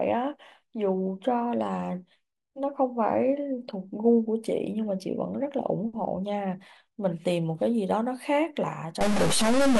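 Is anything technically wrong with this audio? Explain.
Yes. From 9.01 s to the end, at 9.79 s, the speech turns harsh and buzzy, and the gaps between sounds fill with a hiss that follows the waveform. This is likely a stuck bit: one data bit is held at a fixed value, so about half the samples jump by that bit's weight, a step of roughly -20 dBFS. Unlike clipping, which only flattens loud peaks, this error also hits quiet passages, so the pauses themselves become noisy.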